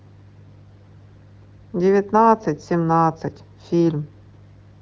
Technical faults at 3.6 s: none

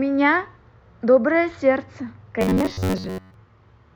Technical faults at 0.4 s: none

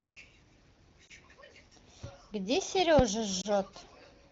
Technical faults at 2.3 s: none

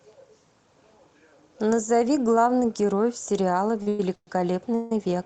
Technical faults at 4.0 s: call audio freeze

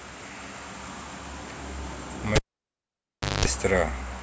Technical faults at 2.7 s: cable pulled and plugged in

